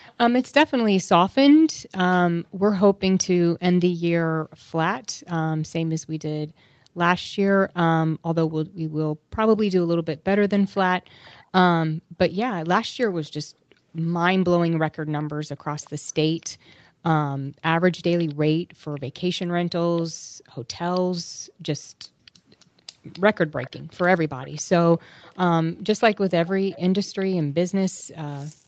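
A speech recording with two call-path faults. A faint delayed copy of the speech trails it by 267 ms, briefly at 0.06–0.14 s at about 30 dB down, then from 9.57 to 27.25 s at about 25 dB down. This is likely echo leak from a far-end loudspeaker that the echo canceller did not fully remove. Unlike room reverberation, it is a distinct repeat at a fixed delay rather than a smooth decay. The room background also ducks by as much as about 40 dB and then recovers, within 1.73–8.76 s (about two seconds in total), 11.91–17.03 s and 20.1–21.55 s (under a second each), and from 25.73 s to the end. This is background gated by the echo canceller, which turned the microphone down while the loudspeaker played. Unlike a dropout, it takes away only the room sound, not the whole signal.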